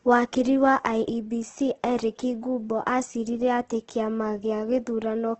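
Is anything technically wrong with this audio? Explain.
Yes. The speech is heavily degraded throughout. Nothing is present above about 8.2 kHz, so the sound is dull and lacks air. The sound is grainy, and the voiced parts sound rough and noisy instead of clean. This is likely Opus compression. Starved of bits, the encoder keeps each band's energy but fills the band with noise or copied lower content. That points to its music mode at a low bitrate, roughly 12 kbps.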